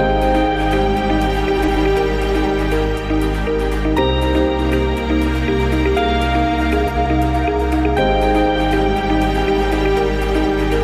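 At 1.57–1.77 s and 6.86–7.07 s, frames out of order: two adjacent blocks of about 93 ms each play swapped, giving a brief garbled flutter. Unlike a dropout or repeat, nothing is lost or doubled, and timing holds.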